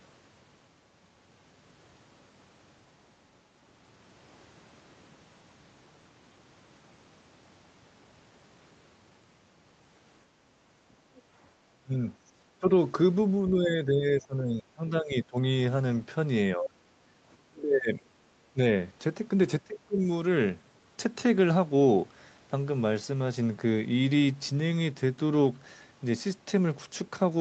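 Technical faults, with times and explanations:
10.31–11.32 s, background gated by the echo canceller: the room tone dips by about 6 dB for around 0.7 s in total as the canceller clamps the microphone. On a spectrogram, the noise floor briefly thins.
11.17–11.21 s and 16.65–16.70 s, other side's voice leaking through: short scraps of a second voice, likely residual loudspeaker echo the canceller missed. The first is very faint; the second is much stronger and sits not far below the main speech. Both appear as brief foreign harmonic streaks.
11.63–12.65 s, 13.50–15.38 s, 16.56–18.58 s and 19.61–20.02 s, speech suppressed in double talk: the talker dips or chops out, the deepest drop reaching roughly 35 dB. This is likely the canceller attenuating both voices while they overlap. The waveform shows gouged envelope gaps, and the spectrogram shows faded, broken harmonics below the 8 kHz ceiling.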